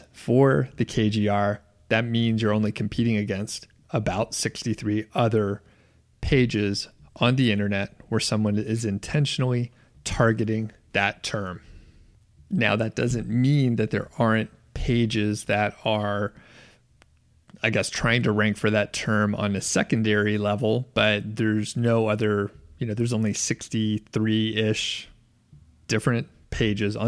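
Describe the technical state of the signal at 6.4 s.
At 6.4 s the signal is intact, with no dropout, distortion, glitch or other fault audible at that moment.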